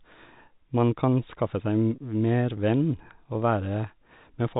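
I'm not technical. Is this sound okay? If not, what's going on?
No. There is packet loss with pitch repetition at about 1.96 to 1.98 seconds. A tiny piece of the speech, about 20 ms, never arrived, which fits a single lost packet. To cover the hole, the receiving end copied the last bit of the speaker's pitch and repeated it, so the gap sounds like a brief, slightly held, buzzy moment. The clip is in the standard telephone format, G.711, which limits the sound to phone-line quality.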